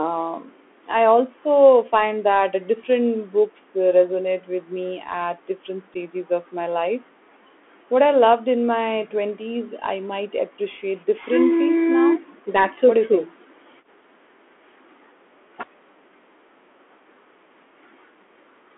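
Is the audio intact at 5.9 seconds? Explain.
No. At 5.94 s there is unconcealed Bluetooth headset packet loss. About 7.5 ms of audio, which fits a single lost packet between headset and phone, never arrived, and nothing tried to fill the gap smoothly. The speech drops out in a very brief hole with hard edges. On this CVSD link the sound also comes back weaker for an instant while the decoder's step size rebuilds.

Underneath that moment, and throughout, the Bluetooth CVSD headset codec is doing plainly audible damage. CVSD encodes each sample as a single up-or-down bit, consistent with a 64 kbps stream, and adapts its step size as it goes. The line is held to roughly 250 Hz to 3.4 kHz, so the speech sounds thin and boxy. Fast, bright sounds outrun the step, so sibilants come out scratchy and a grainy hiss sits beneath the speech.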